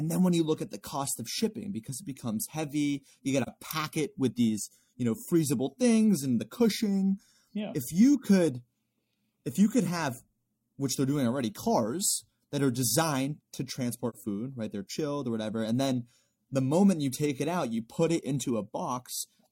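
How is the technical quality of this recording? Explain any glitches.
The speech has two brief dropouts, both AAC frame loss with muting. At 3.42 to 3.49 s, between "it becomes heavy you" and "pack it with these", and at 14.09 to 14.16 s, between "that are designed to" and "food right", the sound dips briefly and comes back. Each gap fits one lost frame of about 43 ms whose spectrum the decoder zeroed, with overlapping windows smoothing both edges. That smoothing is why this kind of gap usually has no click, unlike a hard sample-level dropout.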